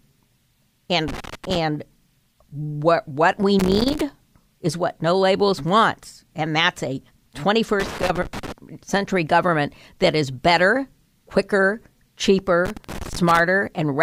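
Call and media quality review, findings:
Loose connector crackle, four bursts: 1.08–1.58 s, 3.59–4.01 s, 7.80–8.52 s, 12.65–13.40 s. Probable component: worn or dirty plug or jack contact in the capture path. Contact making and breaking rapidly as the cable shifts, so the signal is chopped at each break and any DC on the line adds pops. Heard as irregular scratchy crackle over the speech, each burst roughly half to three-quarters of a second long.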